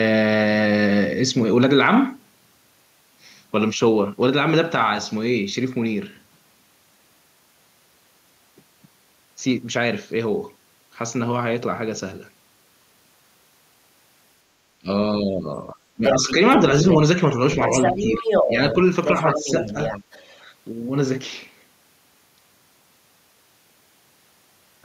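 At 14.8 s the talker's speech briefly ducks by roughly 25 dB, and from 15.19 to 16.23 s it dips again by about 10 dB. This is speech suppressed in double talk, likely an echo canceller turning down both sides while they overlapped. From 16.05 to 16.56 s a second voice comes through about as loud as the talker, with a short scrap at 16.9 s about 10 dB lower. This is the other side's voice leaking through, likely loudspeaker echo the canceller failed to remove. That leakage returns from 17.55 to 20.44 s, about 5 dB below the talker, and from 17.87 to 18.77 s the talker again drops slightly, by about 5 dB.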